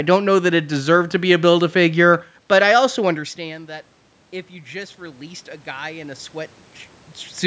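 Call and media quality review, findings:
Automatic gain rising, 4.5 to 6.62 s: speech and room noise swell together over about 2 s, roughly 7 dB up. Probable component is the call's AGC. Input fell by about 19 dB after the talker moved back around 3 s, so the AGC slowly ramped its gain to compensate. The slow ramp, with the background lifting in step, gives it away. Only partial loudness restoration by 6.62 s, so the speech stays about 12 dB down.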